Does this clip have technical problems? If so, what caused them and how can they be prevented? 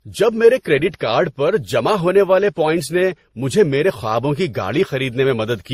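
Yes. Throughout the speech, different compression artefacts are heard stacked together and nothing is present above 19.1 kHz, likely from transcoding between lossy codecs. The character fits an MP3 stage near 40 kbit/s, then Opus, then WMA, each re-encoding the earlier damage and adding its own. To prevent it, keep a lossless master and encode to the final format only once.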